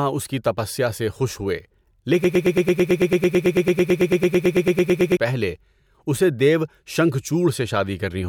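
From 2.24 to 5.17 s, a broken-record loop: a 0.11 s fragment repeats exactly 26 times, likely from a stalled stream. Unlike echo, the lost audio never returns before "پہلے اسے دیو".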